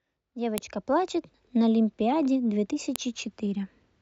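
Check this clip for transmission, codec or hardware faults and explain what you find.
Two sharp clicks cut through the speech, at 0.58 s and 2.96 s, and both are a file header played as audio. Where separately encoded WAV pieces were joined without stripping their headers, the few dozen header bytes get read as sample values, producing a brief loud snap unrelated to the speech around it. On a waveform each shows as a narrow spike standing well above the surrounding signal; on a spectrogram, a thin vertical line spanning the full frequency range.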